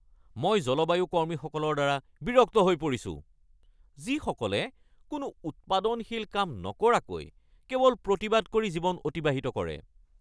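Listening closely to the speech recording, nothing stood out as a technical fault at any point.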